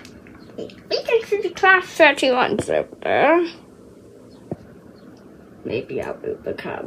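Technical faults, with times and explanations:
No technical faults can be heard anywhere in this clip.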